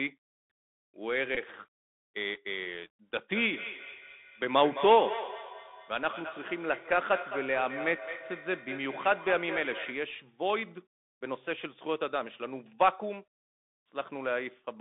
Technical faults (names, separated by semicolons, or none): Bluetooth CVSD headset codec; Bluetooth headset packet repeated; feedback echo between two devices